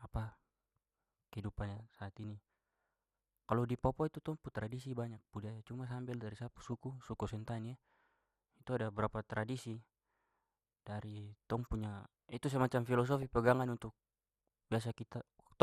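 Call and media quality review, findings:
MP2 compression, whole clip: dull, gurgly speech, highs missing, granular edge. Likely low-rate MP2 with upper sub-bands switched off and the rest coarsely quantised. Damage is plainly audible and sounds like roughly 80 kbps.

DAB burbling at 1.44–1.97 s, 6.61–6.73 s, 13.08–13.27 s: short blips of noise in single sub-bands over the speech. Reception bit errors slip past error correction into the MP2 frames, so wrong samples put noise into single sub-bands. The error rate sounds low, a fraction of a percent.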